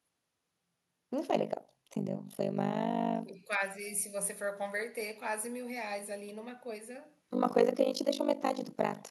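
Speech with overlap-add ripple from 1.3 s to the end: the frames were rejoined with an overlap that doesn't sum to constant gain, so the level dips by about 60 dB around 50 times a second. This produces a harsh, robotic flutter. A waveform shows a regularly notched envelope, and a spectrogram shows evenly spaced vertical stripes.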